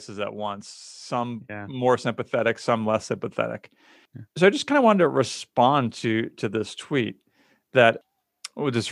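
From 1.08 to 3.11 s, just after "at once", automatic gain rising lifts speech and background together by about 8 dB; the waveform envelope widens steadily and the spectrogram brightens evenly.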